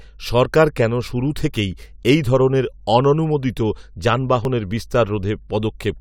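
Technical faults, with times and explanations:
Throughout: mains hum. A steady low 50 Hz tone sits roughly 25 dB below the speech, leaking in from a ground loop or nearby transformer.
0.46 s and 4.45 s: overlap between stream segments. Tiny skips, the first just before "কেন শুরু থেকেই এই", where overlapping timestamps on 2-second segments cut away milliseconds of sound.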